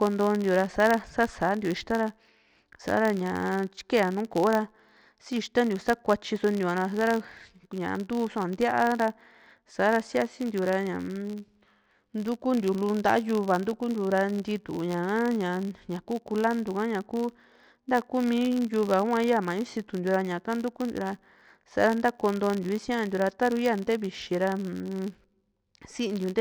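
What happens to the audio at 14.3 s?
At 14.3 s the speech carries the same fault heard across the whole clip: a filter restarted on every block. The filter discards its stored state at each block boundary and begins again from silence, so every block opens with a small transient. Those transients recur at about 86.1 Hz, which fits a 512-sample buffer, and they merge into a low buzz that rises and falls with the loudness of the speech.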